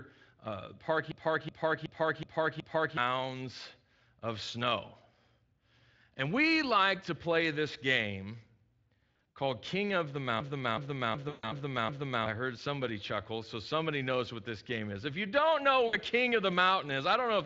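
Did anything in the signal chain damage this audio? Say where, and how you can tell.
Yes. A system hang loop at the driver or buffer stage occurs from 1.12 to 2.97 s and from 10.40 to 12.26 s, ending before "heard somebody chuckle so". A 371.52 ms slice repeats five times at 2.69 Hz, which fits a 16384-sample ring buffer. About two seconds of audio is lost each time. The waveform shows identical repeating blocks, and the spectrogram shows a stutter of copies.

VoIP packet loss concealed by the speech codec appears on the network side at 9.12 to 9.37 s (140 ms lost across 240 ms, longest gap 60 ms), 11.29 to 11.52 s (140 ms), and 15.87 to 15.97 s (60 ms) after "you don't know". The speech decoder stretches its last frame into a buzzy tone or coloured noise that fades. The spectrogram shows smeared harmonics, and the waveform shows a decaying envelope.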